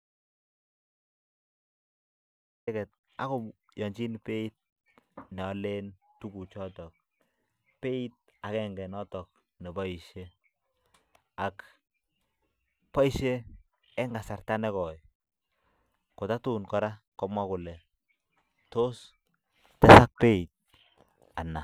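The speech recording opens in an audio dropout to silence: from 0.0 s to 2.67 s the track holds silence, with no room tone or noise floor underneath, and the fault is already in progress when the clip begins. Speech then enters abruptly mid-flow at 2.67 s. The complete absence of background points to the input signal being lost, likely through a disconnected device, a failed link or a mute, while recording continued. Whatever was spoken during that gap is unrecoverable.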